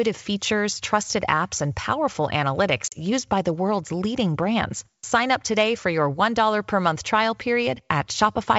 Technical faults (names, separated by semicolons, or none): packet loss on an ADPCM call